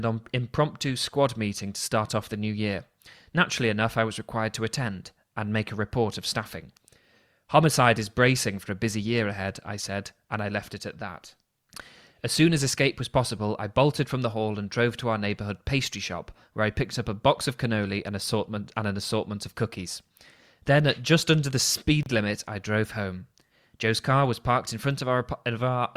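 A speech recording with a single gap at a join of encoded pieces, running from 22.03 to 22.06 s. For about 31 ms the sound drops to silence with smeared edges, then resumes exactly where it left off. The pieces on either side were encoded separately and butted together untrimmed, so the padded final frame of one and the start-up delay of the next both remain as dead air.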